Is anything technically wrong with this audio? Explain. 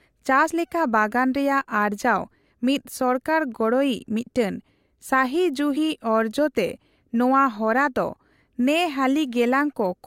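Yes. Damaged data in a compressed stream at 0.49 s and 5.76 s, just before "ᱚᱨᱡᱚᱛᱮ ᱱᱚᱣᱟ ᱦᱚᱨᱟ ᱫᱚ": corrupted frames make the decoder lose sync, producing brief chirps, squawks, clicks or short holes in the speech.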